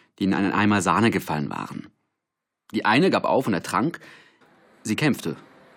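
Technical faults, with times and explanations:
4.40 s, stream segment skipped: Right after "gab auf und ertrank" the speech jumps abruptly forward with a brief blip, as though a stretch of the talk were simply absent. The likely cause is a segment of the stream that failed to load, with the player moving straight on to the next one. The waveform shows a hard discontinuity at 4.40 s, and the spectrogram shows a thin vertical broadband line where the harmonic patterns change without any transition.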